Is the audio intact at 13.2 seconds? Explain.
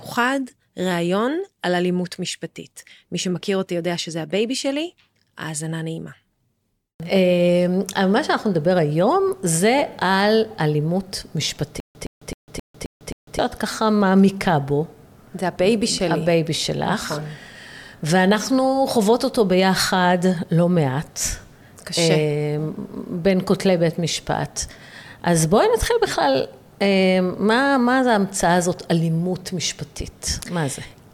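No. At 13.2 seconds the clip is inside a stutter with silent gaps running from 11.80 to 13.39 s. A short 116 ms burst repeats six times, each followed by 149 ms of digital silence, a 265 ms cycle. A stalled stream likely replayed its last fragment at each retry, so the audio for that span is lost.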